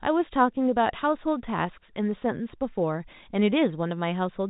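No technical faults are audible.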